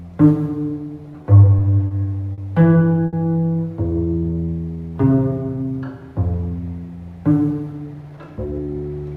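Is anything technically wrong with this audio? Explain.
Yes, there are three kinds of jitter buffer fault.

From 1.58 to 1.62 s, 1.88 to 1.93 s, 2.33 to 2.40 s and 3.06 to 3.15 s, a sound hangs for 20, 30, 50 and then 70 ms with a slight buzz or dip. These are short stalls from a late packet: the buffer ran dry, so the last sound was stretched until data arrived, and nothing was lost.

From 4.05 to 5.85 s the audio drags at about 93% speed while the pitch stays the same. This is a jitter buffer slow-down: the receiver repeated pitch periods over and over, adding about 140 ms to rebuild its reserve.

From 7.73 to 8.90 s the audio rushes at about 115% speed, again with unchanged pitch. This is a jitter buffer speed-up: the receiver cut short slices repeatedly, dropping about a fifth of a second to shrink the excess delay.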